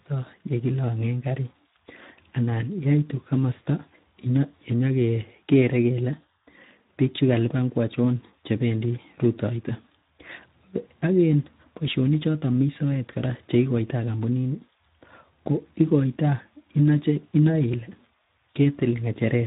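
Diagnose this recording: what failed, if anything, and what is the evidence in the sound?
The failure is at the codec stage: Speex coding damage runs through the whole recording. The speech has a hoarse, grainy texture, because the CELP coder has too few bits to model the excitation, so the fine detail of voicing is replaced by coarse, noisy approximations. Nothing is present above 3.8 kHz, which is consistent with narrowband Speex. The level of damage fits a low quality setting, around 11 kbps.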